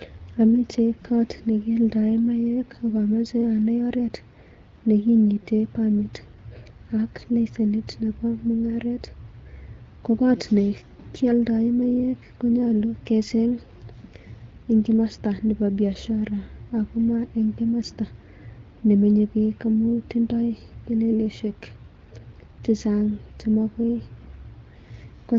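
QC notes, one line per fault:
No faults found; speech passes through the AMR wideband (HD Voice) codec at 12.65 kbit/s with only the light coding texture expected at that rate.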